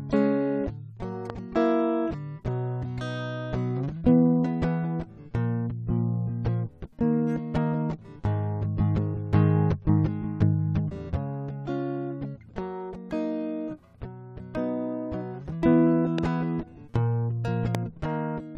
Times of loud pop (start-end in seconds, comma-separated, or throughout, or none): 1.30-1.32, 16.18-16.20, 17.75-17.77